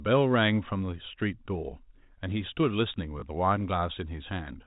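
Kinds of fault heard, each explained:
Packet loss with last packet repeated: At 3.2 s, 20 ms of sound dropped out, which fits one lost packet. The receiver replayed the previous packet to fill the gap. That single repeat shows as a small blip.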